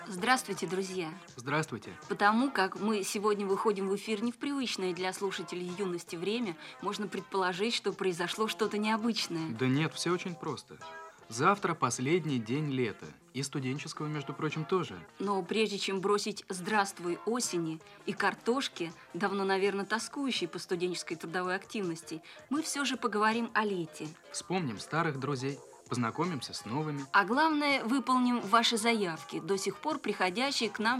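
No technical faults can be heard anywhere in this audio.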